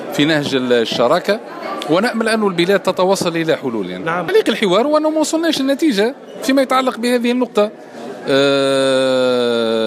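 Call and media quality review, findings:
No audible faults found; nothing to flag.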